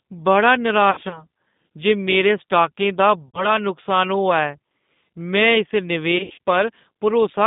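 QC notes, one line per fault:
throughout: G.729 codec, plainly audible; narrow 150 Hz to 3.7 kHz line band, rough synthetic speech from low-rate 8 kbit/s model-based coding.
0.91–1.25 s, 3.28–3.50 s (after "स्टॉकें दा"), 6.18–6.39 s: VoIP packet loss concealed by the speech codec; decoder extrapolates last pitch into fading buzz, voice stays weak briefly after recovery.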